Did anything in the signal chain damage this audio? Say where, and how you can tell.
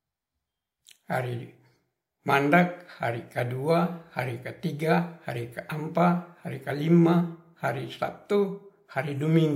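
No, nothing in the chain audibly damaged this speech, so there is no stage to point to.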